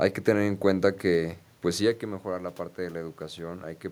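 No technical faults are audible.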